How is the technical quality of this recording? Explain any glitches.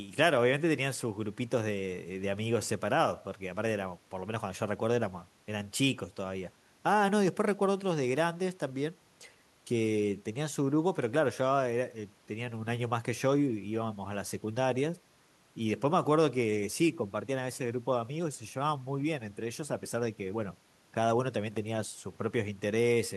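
No audible technical faults.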